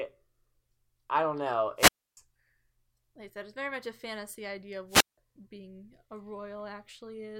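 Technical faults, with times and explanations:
1.77 to 2.17 s and 4.89 to 5.18 s, wireless microphone squelch dropout: each time a rise of hiss or static comes first, then the output mutes for about 0.29 s in the first event and 0.17 s in the second before the speech returns. The analogue FM radio link faded, and the receiver's squelch shut the output off rather than pass noise. The hiss leading into the silence sets this apart from a digital dropout, which cuts off abruptly with no noise build-up.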